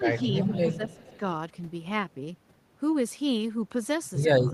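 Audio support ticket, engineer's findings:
Speech suppressed in double talk: speech dips at 0.00–0.04 s (brief, about 10 dB) and 0.70–1.24 s (about half a second, down about 15 dB). Likely the loudspeaker side's echo canceller, unable to separate near talker from loudspeaker echo during overlap, ducking both.

Echo leak: faint delayed copy of the speech at 0.35–0.59 s (about 15 dB under the speech) and 0.91–1.18 s (about 25 dB under), trailing by 361 ms. Likely a speakerphone's echo canceller not fully removing its mic pickup and sending residue back.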